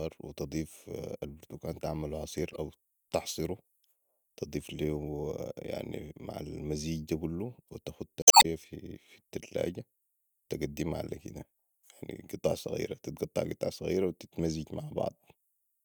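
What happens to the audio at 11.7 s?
Nothing goes wrong at 11.7 s; the speech continues intact through that moment with no dropout, click, distortion or other fault.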